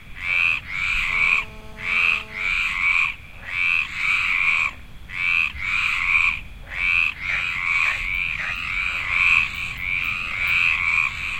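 A recording of everyday sounds carries GSM phone buzz from 1.10 s to 2.48 s. A hard, raspy buzz sits on top of the audio, with a fundamental near 217 Hz and a dense stack of harmonics. It has nothing to do with the sounds themselves. It stays nearly steady, which points to a nearby 2G phone on an active call. Its transmit bursts are picked up and rectified by the audio circuitry. The buzz sits about 23 dB below the signal.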